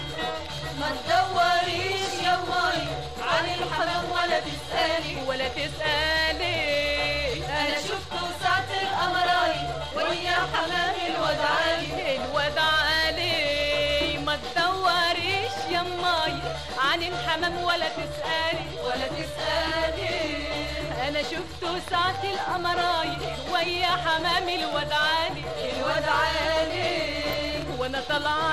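DAB burbling appears at 17.42 to 17.49 s and again at 27.24 to 27.51 s, the second patch lasting several times longer than the first. Weak DAB reception let bit errors, at a rate of around 0.1 to 0.15 percent, slip past error correction into the MP2 audio data. Corrupted samples then inject brief blips of noise into individual sub-bands, heard as bursts of burbling artefacts over the sound.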